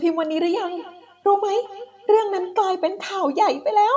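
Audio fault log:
0.51–2.58 s feedback echo between two devices: a second device's playback re-enters this microphone, so speech repeats roughly every fifth of a second, about 18 dB below the speech.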